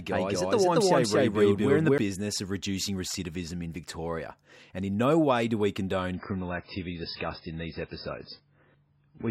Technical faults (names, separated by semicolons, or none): doubled audio track; adaptive stream at a lower bitrate